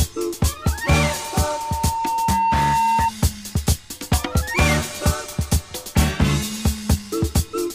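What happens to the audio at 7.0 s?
Nothing goes wrong at 7.0 s; the audio there plays through intact, with no dropout, click or distortion.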